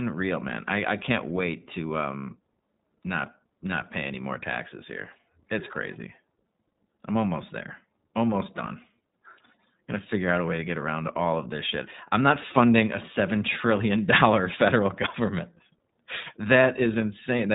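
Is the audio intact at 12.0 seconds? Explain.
No. At 12.0 s, as across the whole speech clip, iLBC codec damage is plainly audible. Nothing passes above 3.8 kHz. Independently coded frames, consistent with 20 ms framing, leave the voice rough and synthetic.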